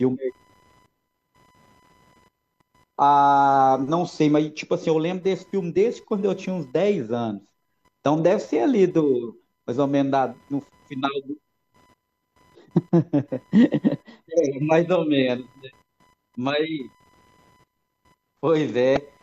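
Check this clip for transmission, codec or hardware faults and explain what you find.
Two faults are present.

Computer activity noise runs through the whole clip. It is a faint buzzing whine pulsing at around 1 kHz, roughly 40 dB below the speech. Shifting processor or graphics load disturbs the shared ground of the audio circuit. The noise follows that activity, not the speech.

Damaged data in a compressed stream appears from 18.94 to 18.97 s. It is a brief blip lasting about 30 ms. Part of the compressed data was corrupt. The decoder misread those frames and lost sync until it found a valid frame header.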